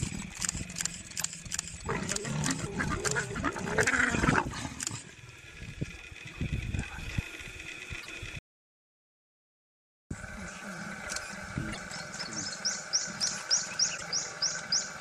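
A short glitch at 1.2 to 1.23 s is the first sign of damaged data in a compressed stream. The same kind of fault returns at 7.98 to 8.07 s, 11.69 to 11.78 s and 13.94 to 14.02 s, each about 84 ms long. At each spot the decoder hit corrupted frames, lost sync and searched for the next valid frame header, producing a chirp, squawk, click or short hole.

From 8.39 to 10.11 s the sound cuts off entirely for about 1.7 s. The gap is silent, with no room tone, and the sound resumes mid-flow. This is an audio dropout to silence. The likely cause is the input signal being lost, through a disconnected device, a failed link or an accidental mute, while the recorder kept writing silence. Whatever occurred during that stretch is missing.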